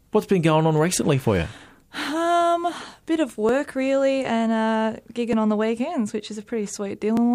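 Regular clicks run through the sound from 1.65 s to 7.17 s, about four of them spaced 1.84 s apart. They are likely clock drift buffer slips: two devices on independent clocks differing by several hundred parts per million, so the buffer between them drifts until a small block of samples, about 70, is dropped or repeated. The strict spacing distinguishes these slips from network dropouts or digital clipping, which land irregularly.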